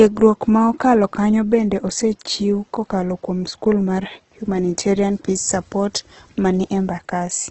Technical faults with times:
0.00-7.51 Opus compression

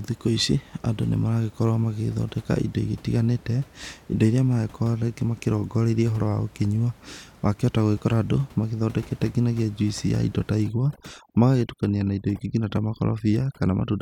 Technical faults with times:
10.64-14.02 overdone noise removal

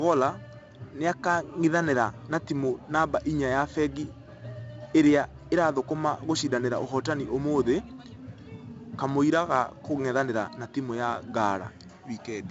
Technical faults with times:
0.00-12.50 4-bit ADPCM compression

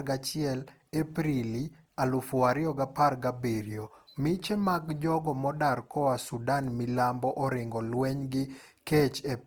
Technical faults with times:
0.00-9.46 Opus compression

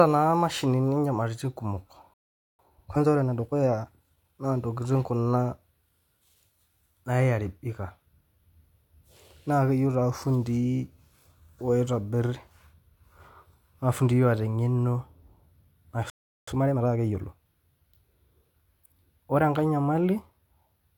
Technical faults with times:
2.14-2.59 playback stall
2.59-4.39 time-compressed catch-up
16.10-16.48 playback stall
16.48-17.22 time-compressed catch-up

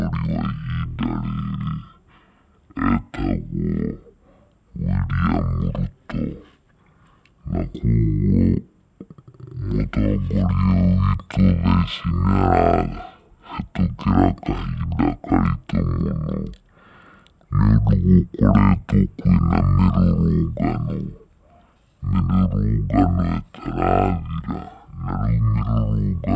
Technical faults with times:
0.00-26.36 wrong sample rate

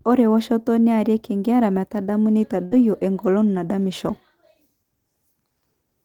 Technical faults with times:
2.65-2.74 burst of packet loss

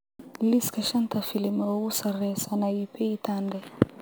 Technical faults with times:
0.00-4.01 crude rate conversion

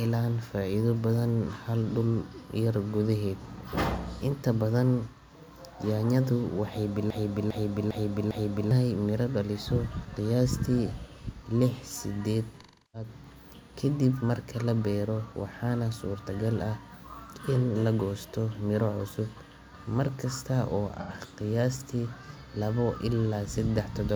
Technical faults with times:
7.10-8.71 broken-record loop
12.60-13.09 AAC frame loss with concealment
21.00-21.11 AAC frame loss with concealment

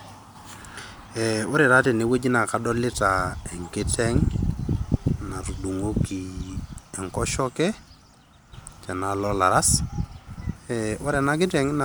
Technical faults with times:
none

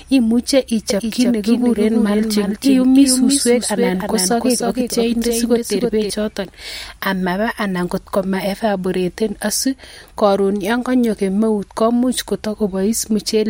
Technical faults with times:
0.90-6.10 doubled audio track

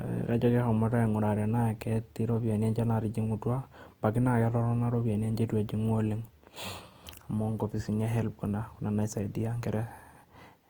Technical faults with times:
0.00-10.69 Opus compression

